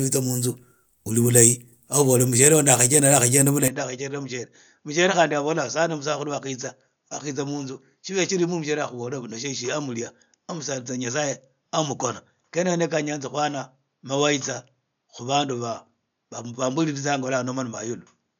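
At 3.68 s the speech abruptly goes duller and roughly 10 dB quieter with no gap, and nothing above 6.8 kHz survives, plus a faint new noise floor sits well beneath it to the end. That's most likely the input switched to a poorer device.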